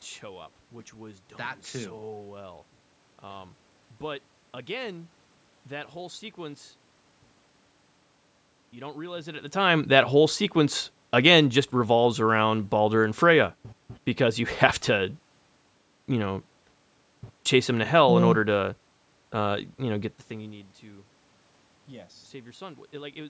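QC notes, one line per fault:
No system faults were found in this speech clip. Call microphone processing leaves nothing above 8 kHz, room noise sits underneath, and the level shifts at about 9 s and again near 20 s because the talker moved relative to the microphone.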